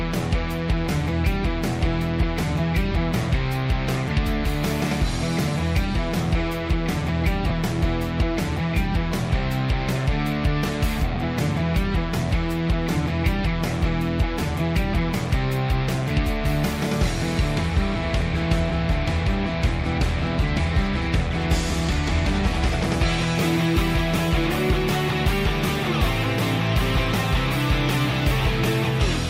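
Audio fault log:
7.49–7.51 s and 11.15 s, lost LE Audio frames: two brief rough, noisy smudges where the sound loses its clear detail and briefly turns hissy, about 20 ms at the first point and 10 ms at the second, consistent with two 10 ms frames and then one. The LC3 decoder fills each gap by replaying the last good spectrum with random signs. That keeps the level but scrambles the phase, so clean content smears into noise. Both gaps are too short for the fade-out to be heard.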